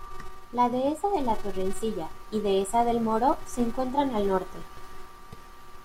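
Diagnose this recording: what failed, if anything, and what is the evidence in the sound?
A filter restarted on every block, in block-based processing, causes a 375 Hz buzz throughout that rises and falls with the speech, consistent with 128-sample blocks, unlike steady mains hum.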